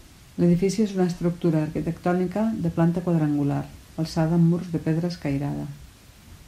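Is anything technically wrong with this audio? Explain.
No, nothing is technically wrong with this audio.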